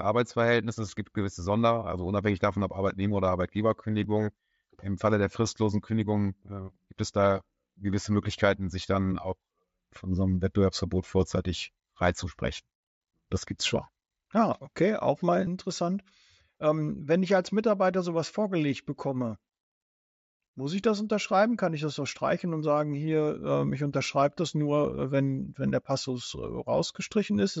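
Speech recorded over a Bluetooth headset link, where the mSBC codec's 8 kHz bandwidth and light graininess are audible, carries two kinds of fault. Overlapping chunks produce a tiny click-stutter at 4.04 s and again at 24.05 s, between "sagen hier ähm ich" and "das nur". Both fall on a 10-second processing grid, and each time about 6.5 ms of audio plays twice because the next chunk began before the previous one finished. Unlike a dropout, nothing is missing. A sliver is repeated, and the exact timing on chunk boundaries separates it from random glitches. Concealed Bluetooth headset packet loss appears at 15.46 s, just after "okay auch mal". A single lost packet of about 7.5 ms was patched by continuing the waveform from the preceding audio, so it passes as a barely noticeable smear rather than a hard gap or a buzzy held tone. It comes from the radio link, not from chunk processing, so it stands alone off the 10-second grid.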